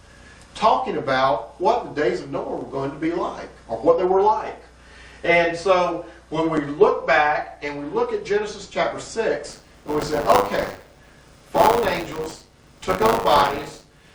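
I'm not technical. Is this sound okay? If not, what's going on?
No. From 9.49 s to the end, the sound has a rough, robotic buzz at 100 Hz. This is buffer tearing. The playback timing has slipped, so a small slice of each short chunk replays sound from a moment earlier, with hard joins.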